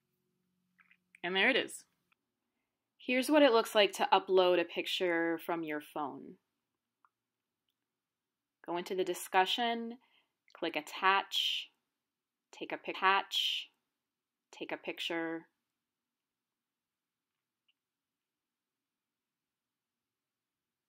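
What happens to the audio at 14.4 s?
At 14.4 s the audio is inside a stream segment repeated, running from 12.94 to 14.93 s. The player queued the same segment twice, so about 2.0 s of material plays again, with a small blip where playback jumps back to the earlier point.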